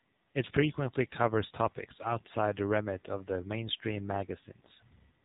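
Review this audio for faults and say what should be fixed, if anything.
AMR narrowband mobile codec, throughout: the audio has passed through AMR-NB at 7.4 kbps, so it is band-limited to below 4 kHz and sounds plainly buzzy and synthetic. At this low rate, each 20 ms frame rebuilds the voice from a vocal-tract model driven by only a few pulses per 5 ms segment. That sparse excitation strips out natural texture and leaves the thin, processed quality heard here. To prevent this, capture or transmit over a wideband path or a higher AMR mode rather than the 7.4 kbps narrowband one.

AMR bit errors, from 1.98 to 2.15 s: for this short stretch the sound turns hoarse, scratchy and gargly while keeping roughly its pitch and level. Within this span three 20 ms frames were damaged on a weak radio link, with corruption of a few percent of the bits. Flipped bits in the less protected parts of each frame put the excitation pulses in the wrong places and throw off the finer gain, pitch and spectral values. 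The core checksum still passed, so the decoder played these frames rather than concealing them. To prevent this, improve link quality or apply stronger error protection so corrupted frames are caught and concealed instead of decoded.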